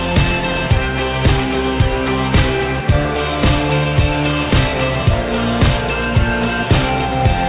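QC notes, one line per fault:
No faults found.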